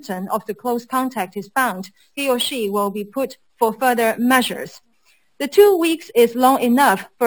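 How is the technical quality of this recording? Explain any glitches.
The recording has one fault, present throughout: imaging from sample-and-hold upsampling. The rate was raised, which points to roughly 12 kHz up to 44.1 kHz, by repeating each sample without smoothing. Mirrored spectrum copies fill 6 to 12 kHz, about 18 dB down. They add a bright metallic fizz that tracks the sound's level.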